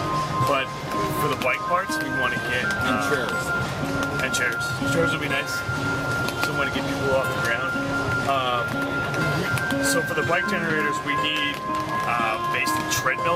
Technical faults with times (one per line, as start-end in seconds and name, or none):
none